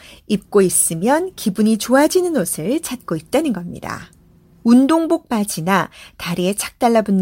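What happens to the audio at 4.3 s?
Nothing goes wrong at 4.3 s; the speech continues intact through that moment.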